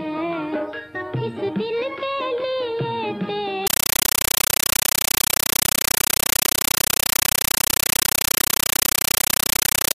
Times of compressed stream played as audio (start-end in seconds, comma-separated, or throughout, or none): 3.67-9.94